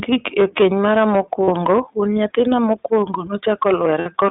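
Hard clipping runs throughout. The speech is driven about 8 dB past full scale, so around 3 percent of samples are cut flat, adding harsh crackle on peaks.

The iLBC codec also colours the whole clip. The band stops near 3.7 kHz, and speech sounds rough and synthetic, which fits the 15.2 kbps mode with 20 ms frames.

Lost iLBC frames occur at 1.44 to 1.50 s, after "e keny mara" and before "wuon nyathina mokwongo". About 40 ms becomes a held, buzzy vowel. A second 60 ms gap at 4.00 to 4.07 s sounds the same before the voice recovers.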